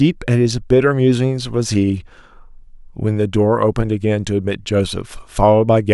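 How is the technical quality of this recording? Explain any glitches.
Nothing to report: no technical faults or glitches are audible anywhere in the recording.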